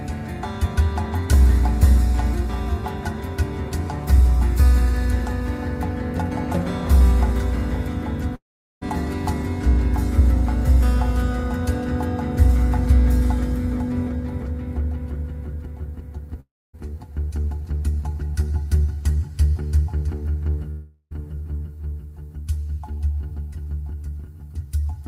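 The audio breaks off three times, at 8.35–8.83 s, 16.40–16.75 s and 20.71–21.13 s. Each time it smears into a fading buzz, falls silent (about 0.4 s, 0.27 s and 0.05 s respectively), then resumes with a section missing. This is likely a long network dropout, with concealment stretching the last sound before giving up.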